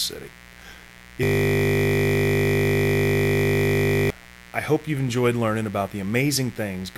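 A speech recording carries mains buzz from start to finish: a raspy, steady buzz sitting roughly 25 dB under the talker, built on 60 Hz and its harmonics climbing into the kilohertz range. The sharp edges come from spikes drawn in twice per mains cycle by something like a dimmer or rectifier, or through a missing shield. Unlike a smooth hum, it sounds gritty and bright, and it never changes across the clip. From 1.23 to 4.10 s a system hang loop takes over. One 20 ms slice of audio repeats exactly, about 140 times, at 50 Hz, because the machine froze while the sound hardware kept replaying its ring buffer. That loop length fits a buffer of a few hundred to about a thousand samples. It also sounds like a buzz, but its 50 Hz pitch differs from the 60 Hz mains, it is confined to that window, and the speech stops advancing entirely rather than merely breaking up.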